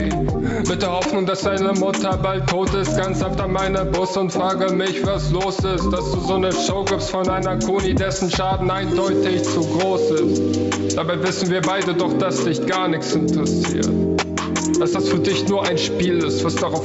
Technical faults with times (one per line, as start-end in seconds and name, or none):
0.00-16.85 gain pumping